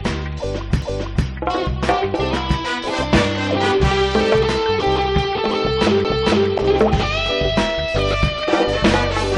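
The audio has two CD skips, at 0.82 s and again at 6.04 s. Each time the laser lost its track and landed on another turn of the disc's spiral, so playback mutes for a few milliseconds, ticks, and resumes from a different point. On a waveform each event is a tiny flat gap with mismatched edges. On a spectrogram it is a thin vertical broadband stripe, with the patterns on either side not lining up.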